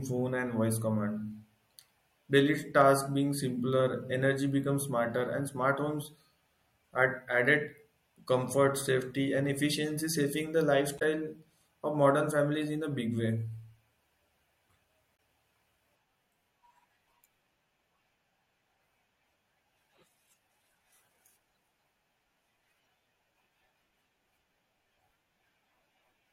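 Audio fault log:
10.98–11.02 s (after "efficiency saving the") and 15.16–15.18 s, damaged data in a compressed stream: brief glitches as the decoder misreads corrupt frames and resyncs.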